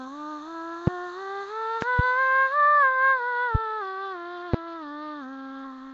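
The whole music clip carries a rough, hissy halo and a smeared, underwater blur. Nothing is heard above 7.7 kHz. This is likely Nellymoser compression, the old Flash codec, at a rate that fits about 32 kbps. Starved bands are filled with noise instead of detail.

Sharp loud pops land at 0.87–0.90 s, 3.55–3.58 s and 4.54–4.56 s. A quick double pop spans 1.82–2.02 s. Each peaks around 20 dB above the music, which carries on underneath. The likely cause is a sudden voltage step, from a switch, static or a driver glitch.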